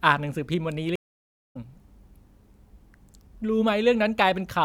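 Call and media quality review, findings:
Stream reconnect, 0.96 to 1.57 s: about 0.57 s of silence, speech then resumes roughly 0.3 s further on. Client connection dropped, new decoder started mid-stream. Unlike a packet-loss gap, content skips ahead and restarts muted/faded.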